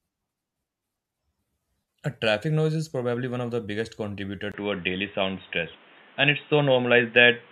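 At 4.52 s, just after "of the biggest contributor", the recording most likely switched to a poorer device, an input switched to a poorer device such as a different microphone or a headset's call profile. A brief gap of about 20 ms marks the change. From there to the end, nothing above 3.8 kHz gets through, so the speech turns dull and boxy. The level shifts noticeably, and a new background noise sits well below the voice.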